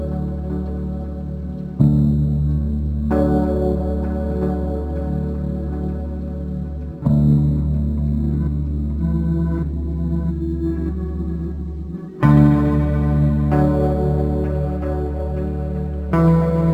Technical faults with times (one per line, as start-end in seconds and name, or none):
0.00-16.73 crude rate conversion